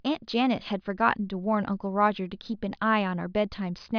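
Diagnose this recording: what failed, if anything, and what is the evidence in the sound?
No audible fault detected.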